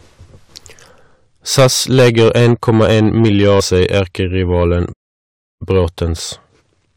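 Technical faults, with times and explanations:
throughout: hard clipping. The speech was driven about 12 dB past what the signal path could pass. Around 2 percent of samples hit the ceiling and are cut flat. Those squared-off peaks add high harmonics, so loud syllables carry a harsh, crackling fuzz.
4.92 to 5.62 s: playback stall. The speech stops dead mid-flow and the output falls silent for about 0.68 s before resuming. The likely cause is a player that ran short of data or had its audio thread blocked until it recovered.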